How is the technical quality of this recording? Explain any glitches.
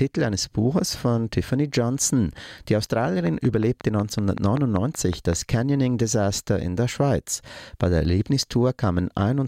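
A train of clicks runs from 3.27 s to 5.34 s, about ten clicks in all, arriving at a steady 5.33 per second. Each pulse has much the same shape, and they peak roughly 10 dB above the surrounding audio, so they stand out clearly as a regular ticking laid over the sound. The even spacing and repeated pulse shape point to an external injection, likely electrical interference from nearby equipment or a faulty connection or power supply.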